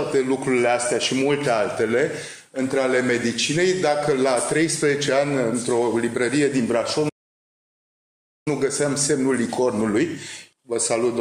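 At 7.09 s the sound cuts off abruptly in mid-flow and stays silent until 8.48 s, a gap of about 1.37 s. This is a playback stall, likely caused by the player running short of data or its output thread being held up so nothing reached the output. On a waveform the trace drops straight to a flat line for that span. A spectrogram shows a clean vertical edge into an empty band across all frequencies, then energy returning abruptly.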